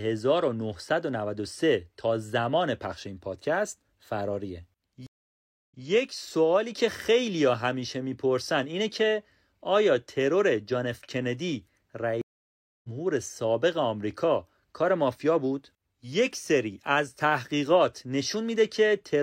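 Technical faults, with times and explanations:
5.07–5.85 s, stream reconnect: the speech drops out for about 0.65 s, then returns about 0.14 s earlier than where it stopped, so a short stretch is heard twice. The link broke, and on reconnecting the server resent a burst that a fresh decoder started from.
12.21–12.89 s, stream reconnect: a silent gap of about 0.62 s, after which the speech picks up roughly 0.4 s further on, so a moment is skipped. The player lost the connection and restarted decoding mid-stream at the live point.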